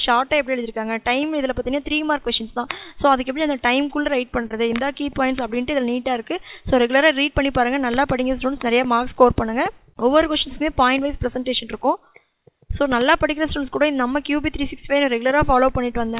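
At 4.42 s there's a short stall from a late packet. The packet didn't arrive on time, so the jitter buffer ran dry and the receiver held the last sound for about 22 ms before picking up where it left off. Nothing is lost, but playback now runs 22 ms later, and you hear that spot as a slight drag or buzz.

Right after, at 4.48 to 4.52 s, comes a short concealed packet loss. This time 20 ms never reached the decoder, so the receiver extended the preceding sound to cover the gap and blended back in. It comes across as a quick smear or wobble. The same thing happens at 8.57 to 8.61 s, where another 20 ms is patched over. Both land in audio that's already band-limited, with nothing above 4 kHz, which is what you'd expect from G.711 mu-law on a call path.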